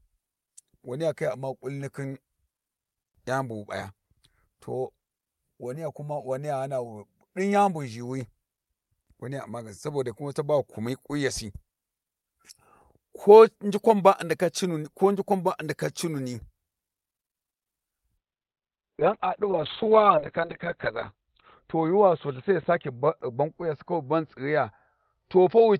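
At 17.53 s there is a short stall from a late packet. A packet missed its playout time and the jitter buffer ran dry, so the receiver held the last sound for about 70 ms until the data arrived, then resumed from the same point. Nothing is lost, but a speech sound is stretched unnaturally, with a faint buzzy hold lasting to 17.62 s. Playback now runs about 70 ms later than before.

Shortly after, at 17.82 s, comes a short concealed packet loss. About 20 ms of speech never reached the decoder in time. The receiver papered over the gap by extending the preceding sound, synthesising about 10 ms before blending back into real audio at 17.85 s. It is heard as a tiny smear or wobble, and a brief consonant in that spot may go missing.

From 18.19 s to the end of the clip there is a call bitrate drop. The bandwidth estimate collapsed, and the encoder went from 64 kbps down to 6 kbps, sitting at the lowest rate for about 3.1 s. 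At that rate Opus codes the speech far more coarsely and narrows the audio band from 20 kHz to 4 kHz. The sound becomes muffled and rough, with a watery, telephone-like quality and dull sibilants.

Within that degraded stretch, from 19.85 s to 20.45 s, a jitter buffer speed-up is audible. The buffer had built up more audio than its target, so the receiver trimmed out short pitch-period slices repeatedly, discarding roughly 40 ms in total. Speech plays at about 105% speed with pitch unchanged, so this passage sounds slightly hurried.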